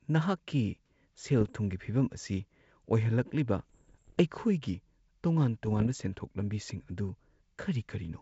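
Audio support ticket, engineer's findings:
Bit errors on an ADPCM link: pops and rough bursts with brief level jumps at 1.41–1.52 s, 3.59–4.18 s, 5.66–5.87 s. Flipped bits upset the decoder's step size and predictor, which fits an error rate near one percent on the wideband G.722 path.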